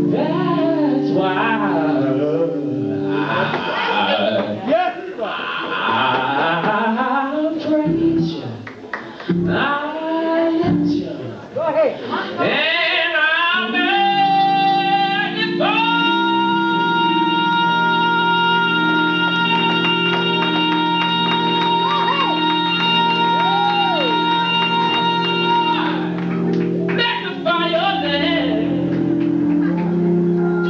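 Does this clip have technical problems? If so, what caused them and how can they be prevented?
No, there are no technical problems in this clip. Nothing here points to a fault, so there is no cause to trace and nothing to prevent.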